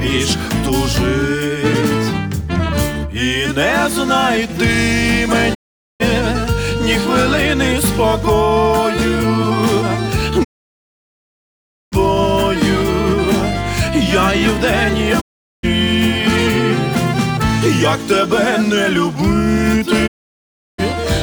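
Digital broadcast dropouts occur at 5.53–6.02 s, 10.43–11.94 s, 15.20–15.65 s and 20.06–20.80 s. Each time, the receiver stopped getting valid frames and muted with a 20 ms fade. The sound simply vanishes, and whatever was broadcast during each gap is lost.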